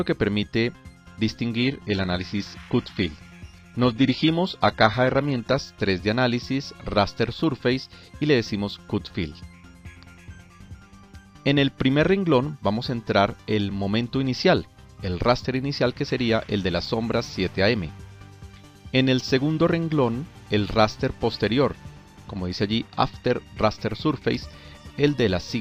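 From 1.56 s to 5.56 s the adaptive stream drops to a lower bitrate. The treble abruptly turns synthetic and artefacts thicken, which fits a switch from roughly 96 kbit/s AAC-LC to 20 kbit/s HE-AAC rebuilding its upper band. Full quality returns at 5.56 s, with no gap at either change.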